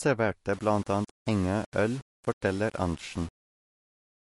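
From the start, the speech has a watery, swirling quality, and nothing is heard above 11.3 kHz, so the treble is dull. This plainly audible damage is likely MP3 compression at a bitrate of about 48 kbps. The encoder was short of bits, so it zeroed weaker frequency lines frame by frame and cut the top band.

From 0.53 s to the end, a rough noise rides along with the sound, roughly 25 dB below the signal. The likely cause is low bit depth without dither, consistent with about 6 bits and plain rounding. That leaves an error that follows the signal instead of staying neutral.

At 2.41 s, a short burst of hiss comes just before a sharp attack, and the attack sounds smeared. This is pre-echo. The codec spread its quantisation noise across the block, so noise sized for the loud onset fills the quiet 16 ms before it.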